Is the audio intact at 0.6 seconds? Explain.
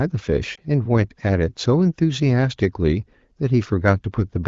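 No. Just before 0.6 seconds, from 0.55 to 0.59 s, the sound briefly dips and warbles, and it can still sound weak as it recovers at 0.6 s. This is one lost AMR speech frame: radio errors corrupted it, so the AMR-WB decoder patched the gap by reusing the previous frame's settings at reduced gain.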